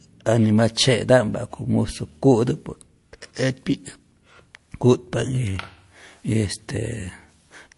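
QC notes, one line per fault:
Throughout: MP3 compression. The speech has a plainly audible watery, swirling texture, and the top end stops dead at 11.3 kHz, so the sound comes across dull and boxed in. This is likely heavy MP3 encoding at a rate that points to around 48 kbps. Starved of bits, the encoder discards everything above a fixed cut-off and zeroes weaker frequency lines, which flicker in and out from frame to frame and create the swirl.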